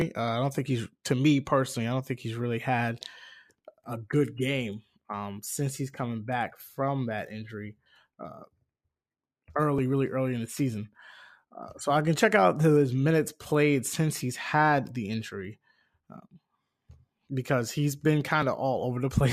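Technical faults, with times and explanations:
Nothing technical stands out anywhere in this speech recording, so there's no fault to list.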